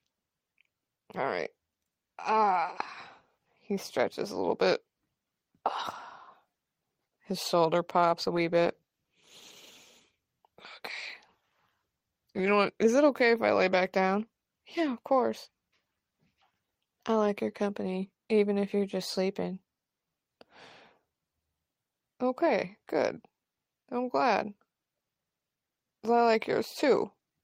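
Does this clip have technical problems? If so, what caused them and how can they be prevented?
Yes, there's a call bitrate drop from about 8.21 s to 12.59 s, with the worst stretch lasting around 4.3 s. The speech gets coarser there, which fits the encoder falling from roughly 32 kbps to 18 kbps. The call's bandwidth estimate sagged, so the codec was told to spend far fewer bits and had to approximate the signal more crudely until the estimate recovered. Giving the call a steadier connection, with wired networking or less competing traffic, would keep the bandwidth estimate from sagging like that.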